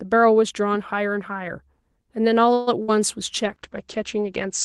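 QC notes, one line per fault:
2.53–2.80 s, call audio freeze: the sound stalls and the last moment is drawn out as a fading buzz or hiss for about 135 ms before carrying on where it left off, nothing lost. Likely delayed packets drained the jitter buffer, so the receiver stretched what it had until they arrived.
2.82–2.90 s, burst of packet loss: a brief held buzz or fading hiss of about 60 ms, then the audio resumes further along with roughly 60 ms skipped. Consecutive packets were lost or came too late, and the gap was papered over with concealment.
3.46–4.64 s, call bitrate drop: the sound turns rough and watery and duller to the end. The Opus encoder fell from 40 to 12 kbps, coding more coarsely and narrowing the top end from about 12 kHz to 8 kHz.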